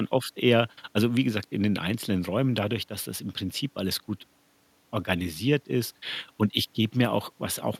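Nothing technically wrong can be heard in this recording of speech, as the signal holds steady throughout with no audible fault at any point.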